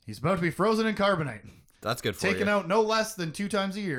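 No technical faults can be heard anywhere in the speech.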